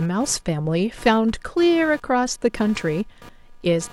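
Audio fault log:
Throughout: computer activity noise, a buzzing pulse train repeating at around 200 Hz and sitting roughly 25 dB below the speech. Shifting processor or peripheral load disturbs the ground shared with the audio path, so the buzz follows the machine's activity rather than the speech.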